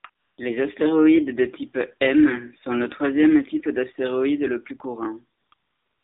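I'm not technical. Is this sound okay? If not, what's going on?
No. AMR narrowband mobile codec, throughout: the speech was squeezed through a 2G/3G phone codec, so everything above 3.7 kHz is gone and voices sound muffled, buzzy and synthetic.

AMR comfort noise, at 0.00–0.04 s, 0.10–0.38 s, 5.40–5.52 s and 5.54 s to the end: during pauses the phone stopped sending speech, and the receiver filled the gaps with smooth artificial hiss that switches in and out.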